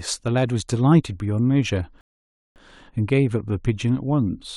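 A rebuffering stall runs from 2.01 to 2.56 s: playback exhausted its downloaded audio and halted until more data arrived. The speech drops to silence for about 550 ms, then picks up exactly where it paused, with nothing missing but time added.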